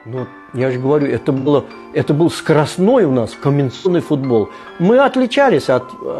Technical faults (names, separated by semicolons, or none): AAC frame loss with concealment